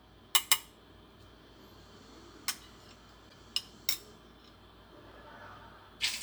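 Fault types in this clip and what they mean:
Broken MP3 bit reservoir: at 3.28 s the sound jumps ahead, and the next 54 ms, to 3.33 s, come out garbled. This is likely frames cut from the MP3 stream, so the following 26.1 ms frames decode borrowed bits from the wrong data.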